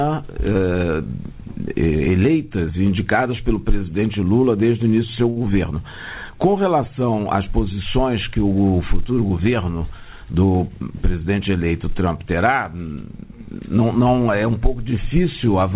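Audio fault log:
5.30–5.39 s, short stall from a late packet: a packet arrived late and the jitter buffer ran dry, so about 60 ms of stretched audio holds one sound too long.
10.08–10.69 s, jitter buffer speed-up: excess buffered delay was trimmed by cutting repeated pitch-period slices, roughly 70 ms in all, so the sound runs about 11% faster at unchanged pitch.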